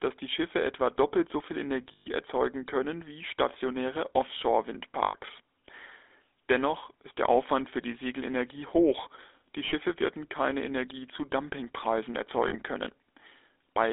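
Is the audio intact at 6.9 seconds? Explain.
No, at 6.9 s the speech carries GSM full-rate codec damage, same as the rest of the clip. The coder rebuilds the voice from a vocal-tract model fed by sparse regular pulses, which fits a 13 kbps full-rate link, so it comes out plainly buzzy and gravelly, boxed into roughly 300 Hz to 3.6 kHz.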